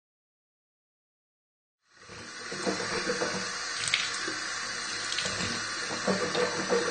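AAC compression, running throughout this everyday sound recording: nothing survives above 9 kHz, and the audio is dull and smeared with plainly audible fizzy, warbling codec damage. That points to AAC-LC at a low bitrate, likely around 32 kbps. The level fades in smoothly from roughly 2 s to 3.1 s.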